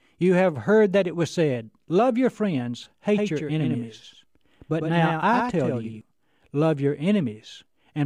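A speech clip with a doubled audio track from 3.15 s, just after "your friends", to 6.01 s, before "love your". A full-band copy trails by about a tenth of a second, roughly 5 dB quieter, and starts and stops abruptly. It is likely a second, slower capture path. On a spectrogram every syllable shows a fainter, identical ghost shifted right; the waveform shows overlapping envelopes.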